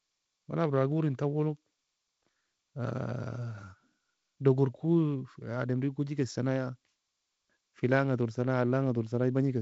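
No faults: the speech carries the upper-band hiss and the cut-off near 7.7 kHz of G.722 wideband telephone coding, with a slightly noisier low band that fits its 48 kbit/s mode.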